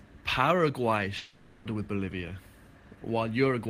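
From 1.17 s to 1.67 s the speech gives way to a smeared buzz carried over from the last sound, fading without ever reaching full silence, and the talk resumes with about half a second gone. This is likely a long network dropout, with the receiver filling the gap.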